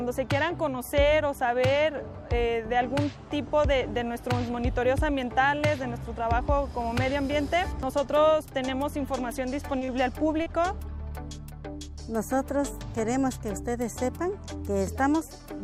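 Short concealed packet loss hits at 9.79 to 9.83 s, 9.85 to 9.90 s and 10.42 to 10.48 s. Audio arrived late, and the receiver extended the preceding sound. Each gap leaves a brief smear.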